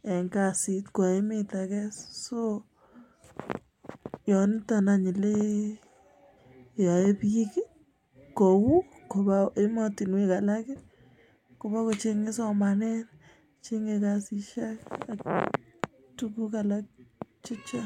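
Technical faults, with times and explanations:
10.35 to 14.85 s, resampler restarted on every block: a steady 100 Hz buzz rides on the speech, present only while sound is passing through it. The rate converter, which fits a 48 to 44.1 kHz conversion, was run afresh on each 10 ms block, so near every block edge it lacked the true neighbouring samples and worked from silence or the wrong end of the block. That leaves a small error at each edge, and those errors repeat a hundred times a second.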